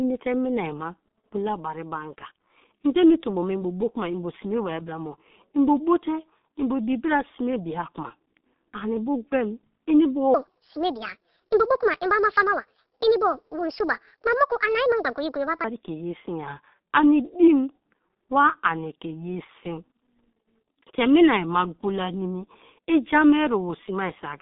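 The whole speech clip runs through what sounds like the G.723.1 codec, and the damage is heavy: nothing above 4 kHz, a narrow 150 Hz to 3.6 kHz band, and that slow-updating voice model leaving everything hoarse, muffled and smeared on consonants, which fits a rate around 6.3 kbit/s.

From 10.34 to 15.64 s there's a section at the wrong speed, running 1.47 times fast, so it turns hurried and jumps up about seven semitones. It drops back to normal right before "ke ye", likely from playback against the wrong clock.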